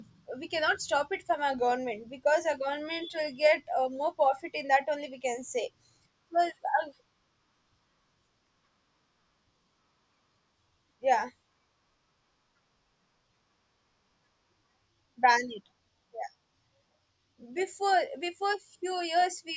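No technical faults can be heard anywhere in the speech.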